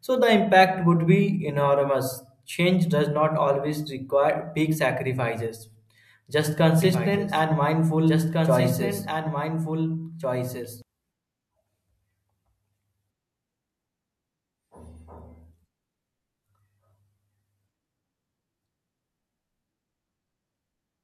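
A speech recording in which, from 6.82 s to 10.82 s, a second copy of the same speech runs underneath the original, trailing it by about two seconds and sitting roughly 5 dB lower. The copy is full-band and dry, with no decay or room colour, and it cuts in and out abruptly at those times. This is a doubled audio track, likely from the signal being captured a second time through a slower path or an edit leaving two offset copies overlapping.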